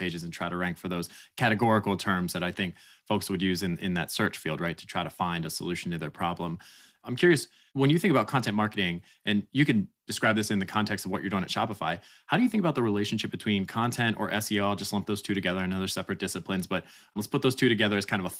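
No technical faults can be heard in this recording.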